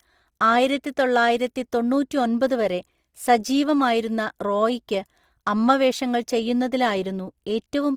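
A speech recording with grainy, rough coloration across the whole clip, where harmonic detail turns noisy and hissy instead of clean. The likely cause is Opus compression in its music (CELT) mode, at a rate that fits about 24 kbps. It is not MP3 damage because the spectrum shows few holes and little swirling. The bandwidth remains full rather than muffled or hoarse, so the encoder has not switched to its speech mode.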